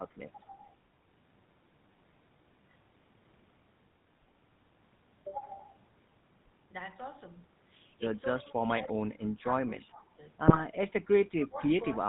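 The whole clip carries the sound of the GSM full-rate codec. This is speech squeezed to 13 kbps by an early mobile coder. It models the vocal tract and feeds it a sparse train of pulses. Much of the fine detail is thrown away. Nothing above 4 kHz survives. The damage is plainly audible. The voice has a buzzy, gravelly edge and a dull, boxy top end.

From 0.31 to 0.39 s the speech dips by about 15 dB. This is likely speech suppressed in double talk. An echo canceller heard both ends at once and turned the near talker down. It happens again from 8.29 to 8.59 s, about 15 dB down. From 8.82 to 10.29 s it is longer and deeper, about 20 dB. The voice sinks.

From 10.47 to 10.64 s GSM bit errors hit the decoder. The sound points to an error rate of around 2 percent across a handful of frames. Corrupted filter, pitch and gain values reach the decoder. The spectrum bends and the level jumps. The speech breaks into squawks and gargling pops for a moment.

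At 11.43 to 11.48 s a brief echo leak appears. A delayed copy of the voice returns about 269 ms late. It sits about 20 dB below the speech. Most likely a far-end loudspeaker fed the microphone, and the canceller missed a scrap.

From 11.46 s to the end, speech is suppressed in double talk again. The drop reaches about 20 dB. The voice dips.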